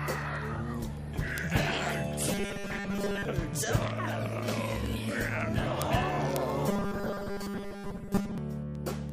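From 0.15 s to 9.09 s, a steady train of sharp ticks runs under the whole clip, roughly one every 0.07 s, some 150 in all. These are word clock ticks: the receiving device is clocked independently of the digital source, off by roughly 300 ppm, and each time the two clocks slip past each other a single sample is dropped or repeated, leaving a brief discontinuity that clicks.

Between 2.32 and 3.25 s, and again from 6.69 to 8.38 s, the sound turns rigid and metallic, a buzz fixed at 200 Hz that only loosely tracks the underlying audio. This is robotic sound from repeated short buffers, likely caused by audio arriving too seldom so that the last few milliseconds are replayed to fill the gap. A 200 Hz buzz fits a repeat of about 5 ms, with roughly 70 percent of the signal replaced by repeats.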